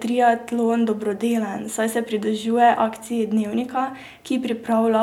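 No technical faults can be heard in this recording.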